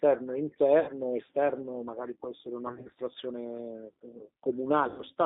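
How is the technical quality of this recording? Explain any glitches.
The speech is narrow and slightly rough throughout, with three short dropouts. The whole clip has a thin, slightly synthetic edge, confined to roughly 200 Hz to 3.7 kHz. That's the G.729 codec, whose damage is plainly audible here. It rebuilds speech from a vocal tract filter, a pitch predictor and a few pulses per frame, and the sound points to its 8 kbit/s G.729A form.

At 0.80–0.92 s, 2.67–2.94 s and 4.88–5.02 s the speech smears into a fading buzzy tone or coloured noise and stays weak briefly afterwards. This is VoIP packet loss concealed by the speech codec. The decoder extrapolates from its last pitch and filter over roughly 70 ms, 110 ms (scattered gaps, none longer than 30 ms) and 100 ms of missing audio.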